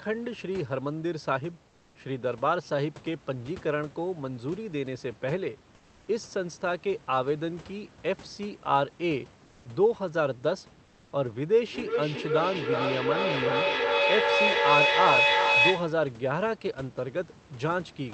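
At 1.69–1.95 s, 5.75–6.07 s and 9.45–9.65 s, comfort noise replaces the background, likely from Opus discontinuous transmission: smooth, featureless noise about 2–4 dB quieter, flat and textureless on a spectrogram. From 11.67 to 16.13 s, feedback echo between two devices returns the speech roughly every 0.4 s, building to about 4 dB above it, seen as stacked, smeared repeats.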